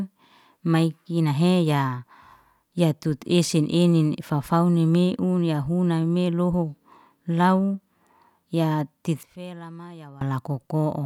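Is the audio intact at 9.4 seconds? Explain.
No. From 9.23 to 10.21 s the speech drops by about 21 dB and turns faint, its centre nearly gone. The likely cause is one channel inverted: with one side's polarity reversed, the shared content cancels when the channels sum to mono.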